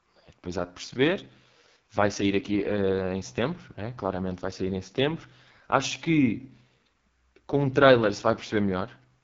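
From start to finish the speech passes through the AMR wideband (HD Voice) codec at its lowest mode, which fits 6.6 kbit/s, leaving it rough and raspy. A spectrogram shows nothing above 7.5 kHz, and the band above 6.4 kHz is smeared noise instead of harmonic structure.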